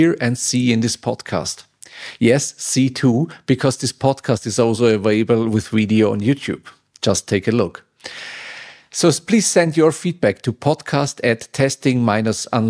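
No technical faults can be heard anywhere in the clip. There is nothing to place on the timeline.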